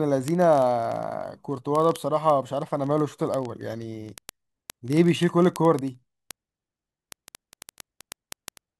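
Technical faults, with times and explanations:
0.10 to 8.78 s, word clock ticks: the speech carries a steady train of sharp ticks, roughly fifty a second and some four hundred in all, of uneven strength. The receiving device is running on its own clock rather than locking to the digital link, with the two rates differing by around 0.1 percent. Each time the clocks slip past one another, a single sample is dropped or repeated and its neighbours are misread, leaving a brief discontinuity that is heard as a tick.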